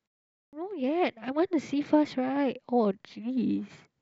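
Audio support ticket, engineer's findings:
Clipped start after a pause at 0.32 s. Speech comes in abruptly out of the opening silence, first 0.21 s swallowed, so the onset arrives already mid-sound. Probable component: output device or its power-save path. It sleeps during the quiet lead-in and needs time to wake and re-lock, so audio sent during that window gets dropped until about 0.53 s.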